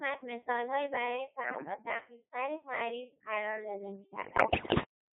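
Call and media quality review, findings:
Robotic, buzzy speech throughout, band-limited to about 150 Hz to 3.5 kHz. Component: Codec 2 vocoder, heavy damage. Pitch, voicing, energy and envelope are resynthesised from sine waves, so the waveform is lost. The sound points to a low mode near 2.4 kbit/s.

1.50 to 1.74 s: brief warble with pitch and level lurching. Bit errors on the digital voice radio link, with roughly a tenth of bits flipped, corrupting per-frame vocoder parameters.

4.24 to 4.84 s: longer burst of bleeps and garbled robotic gibberish, with timbre jumping. Same bit-error mechanism, at a heavier error rate of around one bit in seven, scrambling each frame's pitch, voicing and spectrum.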